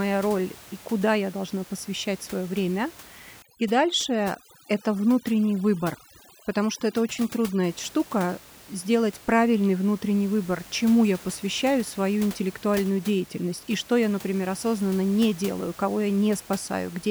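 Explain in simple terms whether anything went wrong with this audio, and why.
Between 3.42 and 7.64 seconds, a noise reduction tool was pushed too hard, a fault known as overdone noise removal. It tries to strip out the background noise of the room, but at this setting it also cuts away quieter parts of the speech that resemble that noise. The background drops and breaks up into twinkling, warbling specks. The room noise beyond that stretch stays well beneath the speech.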